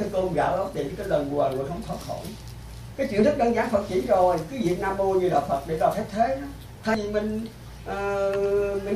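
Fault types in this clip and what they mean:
Compressed frames skipped: at 6.95 s the audio lurches forward, losing roughly a tenth of a second. One whole compressed frame, about 93 ms long, never reached the output, so playback resumed further on.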